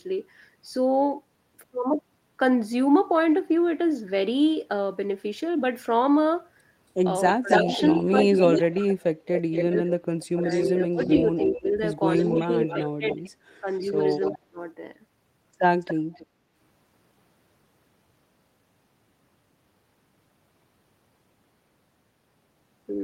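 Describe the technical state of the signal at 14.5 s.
At 14.5 s the speech is pulled down sharply. The dip runs from 14.31 to 14.58 s and is at its deepest roughly 30 dB. For around a fifth of a second the voice nearly vanishes. This is likely speech suppressed in double talk. Both ends were talking at once. The echo canceller could not tell the near talker from the loudspeaker echo, so it muted both together.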